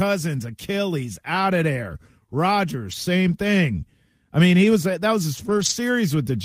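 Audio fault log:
2.91 s and 5.37–5.71 s, lost packet rebuilt from error correction: no gap, but the sound turns briefly rough and noisy because low-bitrate backup copies from the following packets were played instead. The waveform stays continuous; the spectrogram shows smeared, grainier detail.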